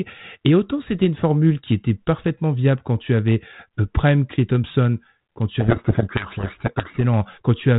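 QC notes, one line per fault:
5.60 to 7.01 s, codec payload misread: the receiving decoder reads the G.726 code words with their bit order reversed, so each sample difference it applies to the adaptive prediction is wrong and the predictor wanders off the real signal. For those 1.4 seconds the speech is buried under harsh, grinding distortion. Either side of the burst, the 32 kbit/s G.726 stream decodes with only light codec roughness and no content above 4 kHz.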